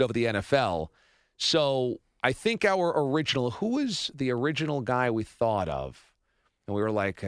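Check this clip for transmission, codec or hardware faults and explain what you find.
Nothing in the speech signal points to a problem introduced in transmission, encoding or the playback hardware; it holds steady and continuous throughout.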